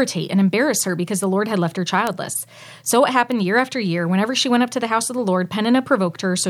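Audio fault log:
1.24 s, 2.07 s, 3.32 s: bit error spike. A flipped bit throws one sample (two at 2.07 s) far off and straight back, peaking at about −12, −6 and −12 dBFS. Each is a sharp broadband tick unrelated to the speech, with no gap or discontinuity around it.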